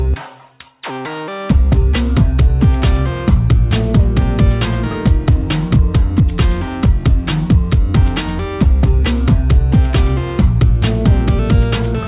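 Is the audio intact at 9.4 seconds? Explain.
Yes, the audio at 9.4 seconds is intact, with no dropout, click, distortion or other fault at that point.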